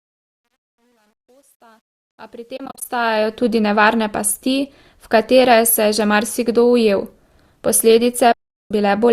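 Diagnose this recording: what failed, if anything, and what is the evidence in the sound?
The fade-in over the first 3.44 s shows truncation distortion from a sample-format or gain stage. The quietest part, up to about 2.44 s, turns gritty, which fits about 10 bits without dither. A clean editor's fade would thin out smoothly, not break up.

AAC frame loss with muting comes from the network or codec path. From 2.57 to 2.85 s there are scattered soft gaps totalling 150 ms, the longest about 40 ms. A solid 390 ms hole runs from 8.32 to 8.71 s. The edges fade out and back in, unlike a hard dropout.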